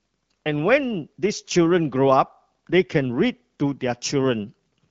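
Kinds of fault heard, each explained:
No kinds of fault can be heard in this speech clip. It comes through the AMR wideband (HD Voice) codec at 12.65 kbit/s, which keeps the speech clear with only light coding traces and an upper band that stops around 7 kHz.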